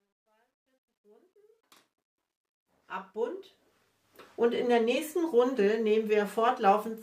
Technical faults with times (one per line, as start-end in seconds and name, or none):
0.00-4.22 truncation distortion on a fade